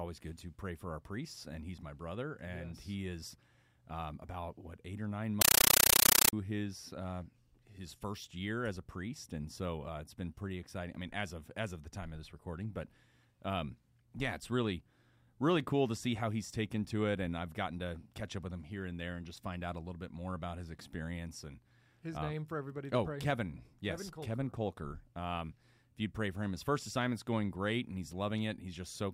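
From 5.41 to 6.33 s the speech drops out and you get a harsh, very loud chattering static instead: a compressed stream played as audio. Something on the digital link passed encoded data, which sounds like an AC-3 stream, straight through as if it were plain samples. Each frame comes out as a noise burst of about 9.3 ms followed by silent padding, repeating at 31.25 per second, hence that buzzy rattle.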